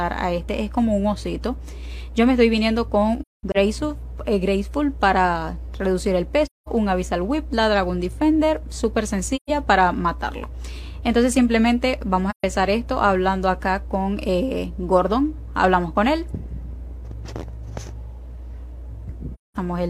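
Soft-edged holes open in the sound at 3.21–3.56 s, 6.45–6.69 s, 9.36–9.50 s, 12.30–12.44 s and 19.34–19.57 s, fading out and back. This is AAC frame loss with muting: the decoder zeroed the missing frames, and the overlapping windows smooth the edges of each gap.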